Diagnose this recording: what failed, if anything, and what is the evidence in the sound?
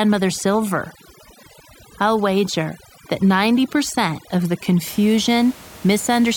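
Overdone noise removal in the call-processing stage affects the speech from the start to 4.86 s. The noise suppressor is set too aggressively: wherever a frequency band sits close to its noise estimate, it drives that band far down or off, and quieter parts of the speech go with it. The background drops and breaks up into twinkling specks. On a spectrogram, the gaps show as black with isolated bright dots, and the speech harmonics look ragged and fragmented. After 4.86 s the room noise returns about 22 dB below the speech.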